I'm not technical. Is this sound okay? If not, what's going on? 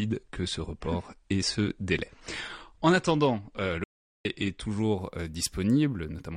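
No. Two things go wrong. The first is an adaptive stream starting at a low bitrate. To get going quickly, the player began on a cheaper, lower-quality version of the stream and only switched to a better one after checking the connection. So from the start until 4.87 seconds, the speech sounds dull and smeary, with nothing above about 9.7 kHz. At 4.87 seconds the clarity jumps up all at once, with no break.

The second is an audio dropout to silence. Most likely the incoming sound was briefly lost, perhaps through a loose connection or an accidental mute, and the recording carried on capturing pure silence. From 3.84 to 4.25 seconds, about 0.41 seconds, the speech cuts off mid-flow into dead quiet, with no background hiss at all, then resumes. Whatever was said during that gap is lost.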